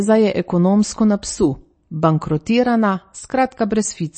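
Throughout the speech, the top end stops abruptly, with nothing above about 8.4 kHz, and the remaining sound has a watery, swirling quality with metallic chirps on s sounds and smeared onsets. This is likely MP3 compression at a low bitrate, which fits about 32 kbps. Starved of bits, the encoder has cut the treble at a fixed point and dropped weak frequency lines that flicker on and off between frames, producing the swirl and chirping.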